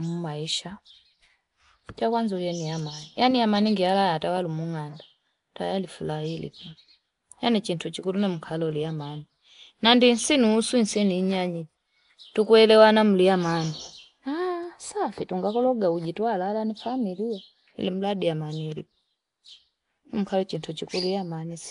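Throughout the speech a rough, hissy halo surrounds the sound, with a smeared, underwater texture and nothing above 10.6 kHz. This is likely Nellymoser compression, Flash's fixed-rate block codec, which leaves weak bands unfunded and fills them with noise, pointing to roughly 44 kbps.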